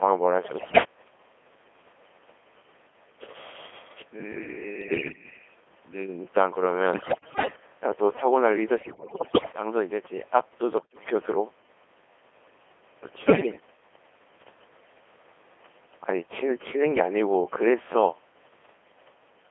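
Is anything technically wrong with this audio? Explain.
Yes. The speech has passed through the Codec 2 vocoder and has also been hit by bit errors on digital voice radio.

Codec 2 vocoder, throughout: Only pitch, voicing, energy and a coarse spectral envelope are sent, and the decoder rebuilds the speech from sine waves rather than keeping the waveform. The damage here is heavy, with a sound that fits the 2.4 kbit/s mode. The speech is robotic and buzzy, confined to a narrow 300 Hz to 3.4 kHz line band, with the natural texture of the original replaced by synthetic tone.

Bit errors on digital voice radio, at 0.44–0.84 s, 4.82–5.24 s, 6.94–7.56 s, 8.78–9.52 s, 10.78–11.10 s and 13.26–13.60 s: Corrupted bits reached the low-rate decoder, where each bit sets parameters for a whole frame. Roughly one bit in ten was wrong in most bursts, somewhat fewer at 4.82 s and more at 8.78 s, the longest and worst burst. 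In each burst the synthetic speech lurches in pitch, level and tone colour, breaking into bleeps, warbles and robotic gibberish.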